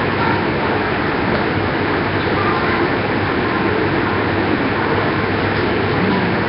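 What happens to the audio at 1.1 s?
At 1.1 s, as across the whole clip, the sound is rough and hissy and cuts off near 5.3 kHz, likely from Nellymoser compression, whose noise-filled empty bands give a steady hiss rather than an MP3-like swirl.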